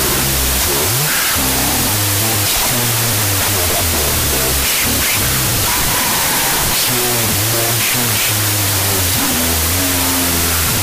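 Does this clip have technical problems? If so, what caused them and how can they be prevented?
Yes. Throughout, loud harsh noise buries slowed, octave-lowered speech at half speed. This is a wrong sample width, consistent with 32-bit float data read as 16-bit integers, which splits each sample into mismatched values. Prevent it by declaring the sample format explicitly and checking it wherever audio is written or read.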